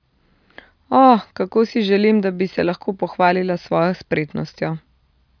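No technical faults are audible in this speech recording. There is no moment in it that calls for a fault description.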